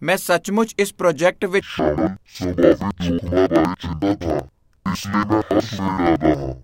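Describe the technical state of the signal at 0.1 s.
At 0.1 s the signal is intact, with no technical fault audible at that moment.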